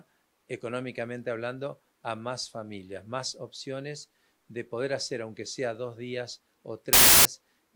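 At 6.93 s, running to about 7.25 s, there's a wrong sample width fault. The sound turns into loud noise with the original buried underneath, sped up by about 1.33 times. That fits packed 24-bit samples being read as 32-bit, so bytes get mismatched.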